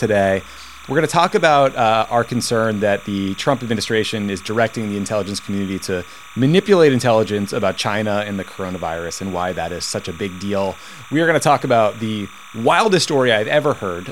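From start to finish the clip carries timecode bleed: linear timecode from an adjacent track or cable has coupled into the audio path. The code flips between tones near 1 and 2 kHz, producing a steady chirping warble sitting roughly 20 dB beneath the wanted sound. Its frame structure repeats at 29.97 frames per second. On a spectrogram it appears as two persistent horizontal bands around 1 kHz and 2 kHz, finely striated in time.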